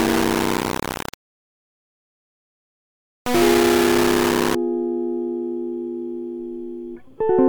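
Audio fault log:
0.00 to 4.55 s, low bit depth without dither: the music sounds coarse and grainy, with grit that follows the signal. It's likely down to rounding onto very few levels, around 3 bits, with no dither, so the error sits almost as loud as the music.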